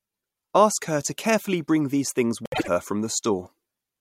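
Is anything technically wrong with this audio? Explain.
Yes. From 2.45 to 2.68 s, just after "carefully bring these things", the speech has frames out of order: two adjacent blocks of about 78 ms each, which fits runs of three frames, were decoded in swapped order. That short stretch plays back-half-first as a garbled flutter, and no time is lost.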